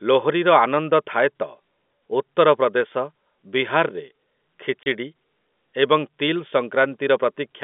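A telephone-band speech recording, heard through narrowband G.711 coding, has a hard-edged 30 ms gap at 4.83 to 4.86 s. That is packet loss filled with silence, consistent with one dropped packet replaced by nothing.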